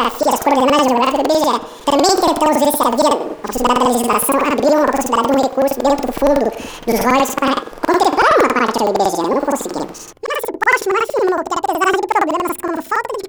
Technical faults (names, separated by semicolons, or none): planar audio read as interleaved